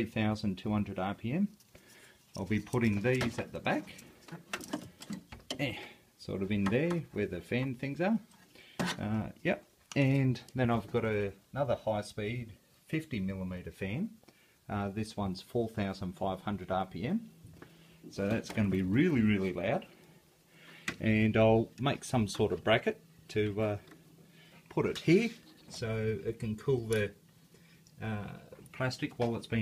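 No technical faults are audible.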